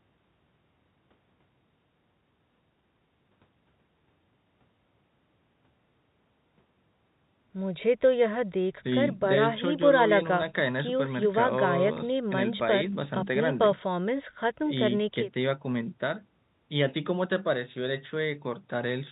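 Nothing goes wrong anywhere in this speech, which simply has the narrow, telephone-band sound of G.711 coding at 64 kbps.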